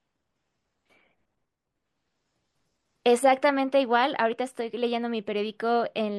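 No technical fault can be heard anywhere in this speech recording; the signal stays intact from beginning to end with nothing added, lost or disturbed.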